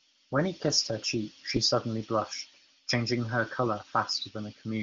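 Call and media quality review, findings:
No faults found: the speech is band-limited near 7 kHz, which fits a high-rate AMR wideband (HD Voice) path, with at most faint traces of coding in the audio.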